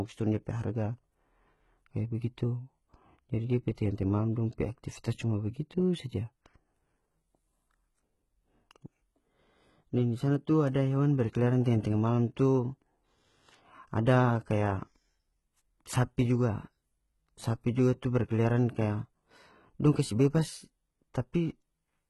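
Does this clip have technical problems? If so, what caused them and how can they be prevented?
Yes. The speech carries heavy HE-AAC compression damage from start to finish. Above the lower band the treble sounds synthetic, with s sounds coming out gritty and a bit lispy and nothing at all above about 11.8 kHz. That's likely spectral band replication at a very low bitrate, something like 16 kbps HE-AAC v2, where the top end is copied up from lower bands instead of coded, so it doesn't match the real harmonics. To avoid it, encode at a higher bitrate or use plain AAC or Opus.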